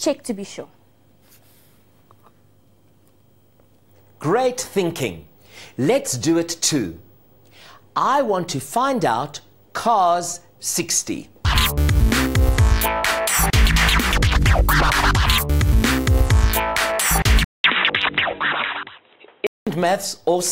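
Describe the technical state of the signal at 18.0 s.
At 18.0 s the recording is running through an input switched to a poorer device, likely a change of microphone or a headset's call profile, from 17.44 s to 19.67 s. A 200 ms silence marks the switch. The replacement path passes nothing above 3.9 kHz, so the sound turns dull and boxy, with a faint new background noise sitting well below the signal while the overall loudness stays roughly the same.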